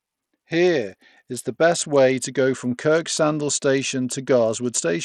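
Throughout the speech the treble flickers and thins under a gritty grain, likely Bluetooth SBC compression starving the upper sub-bands, which fits a bitrate near 80 kbps.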